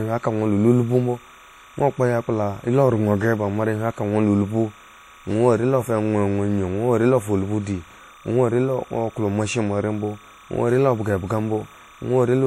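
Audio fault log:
Throughout: timecode bleed, a chirpy warble around 1 and 2 kHz sitting roughly 25 dB under the speech, linear timecode leaking in at 29.97 frames per second.
Throughout: WMA compression, likely the cause of the plainly audible ringing, washy smear and nothing above 18 kHz, which fits a bitrate around 48 kbps.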